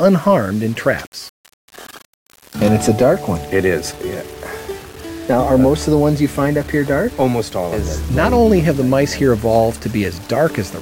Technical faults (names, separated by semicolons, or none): low bit depth without dither